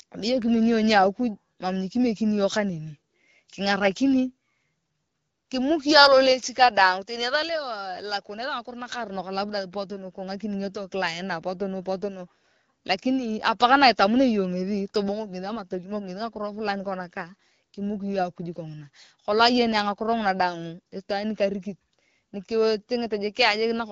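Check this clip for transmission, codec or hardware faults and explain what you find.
No transmission, codec or hardware faults can be heard in this speech. The AMR wideband (HD Voice) path at 12.65 kbit/s leaves only light coding traces, with the band above 6.4 kHz filled in as usual for AMR-WB.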